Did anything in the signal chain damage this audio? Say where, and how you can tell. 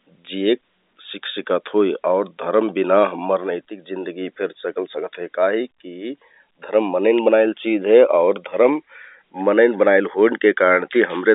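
No, no fault in the chain.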